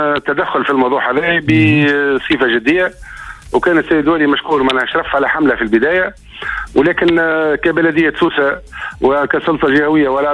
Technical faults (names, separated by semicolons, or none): none